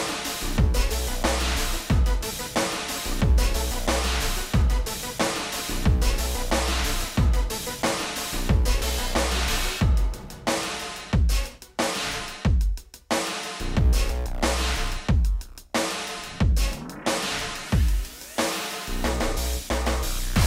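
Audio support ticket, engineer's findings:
No faults found on listening. Nothing in the audio points to any problem requiring action.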